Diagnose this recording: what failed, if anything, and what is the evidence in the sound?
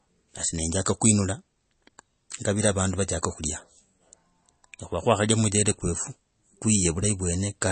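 The failure sits at the codec stage and runs through the whole speech clip. Nothing is present above 8.3 kHz, so sibilants lose their edge, and the plainly audible watery, swirling texture points to likely MP3 compression at a low rate, fitting roughly 32 kbps. The starved encoder drops the treble at a fixed cutoff and switches weak spectral lines on and off between frames. A spectrogram would show a hard shelf at 8.3 kHz and speckled, flickering gaps below it.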